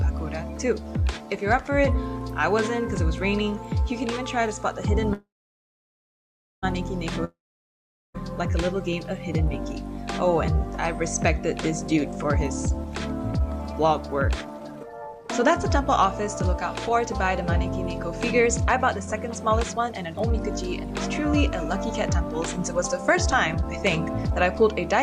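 A call audio freeze runs from 5.13 to 6.65 s, likely because packets were held up and the jitter buffer ran dry. The last sound carries on as a fading buzz, then about 1.4 s of silence. The audio resumes where it stopped, now 1.5 s later.

A long network dropout follows from 7.25 to 8.16 s, likely from packets that never arrived. The sound trails off into a brief fading buzz and about 0.8 s of silence, and it returns having skipped roughly 0.9 s.

A jitter buffer speed-up spans 11.94 to 15.51 s. The receiver trimmed tiny pitch-period slices over and over to shed excess buffered delay, playing at 123% speed with unchanged pitch and cutting roughly 0.7 s, so it sounds hurried. A milder speed-up, at 107%, runs from 18.39 to 24.62 s and removes roughly 0.4 s.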